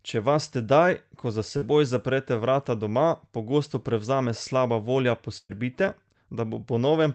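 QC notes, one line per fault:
1.57–1.64 s, short concealed packet loss: about 40 ms never arrived, so the decoder stretched the last sound across the hole, leaving a brief smear.
5.38–5.51 s, burst of packet loss: 120 ms went missing. The last sound gets carried on and fades out, followed by 40 ms of silence, then the audio jumps ahead.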